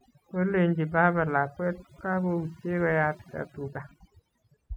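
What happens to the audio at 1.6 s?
At 1.6 s the speech carries overdone noise removal, present across the whole clip: bands near the noise estimate are cut away, leaving twinkling specks in the background.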